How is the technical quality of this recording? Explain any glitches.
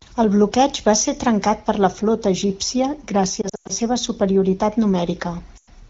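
The recording has two short dropouts where AMR wideband (HD Voice) speech frames went missing. The coding itself sounds clear and only lightly coloured, which fits a rate around 12.65 kbit/s.

The lost AMR speech frames hit from 3.41 to 3.72 s, about 180 ms lost in patches across 280 ms, and again from 5.57 to 5.68 s, 100 ms lost. Corrupted frames got thrown out, and the decoder kept replaying its last good pitch and vocal-tract settings at dropping gain. You hear the sound drop quickly to near silence, then come back a bit weak or rough.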